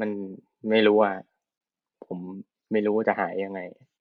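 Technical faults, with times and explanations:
1.58 to 1.61 s, Bluetooth stall: the speech drops to dead silence for about 26 ms, then carries on. That's likely the headphones' buffer running dry when interference held up packets, so playback simply paused until the resent data arrived.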